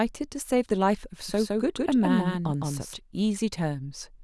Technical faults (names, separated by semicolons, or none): doubled audio track